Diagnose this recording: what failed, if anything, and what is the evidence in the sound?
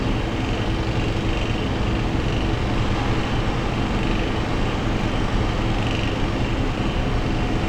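Nothing failed; no fault is audible anywhere.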